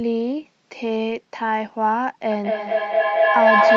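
From 2.31 s to the end there's feedback echo between two devices. A second device in the room replays the call and its mic sends it back around, about every fifth of a second. The repeats build up rather than fade, reaching about 9 dB over the speech, all within the call processing's 8 kHz band.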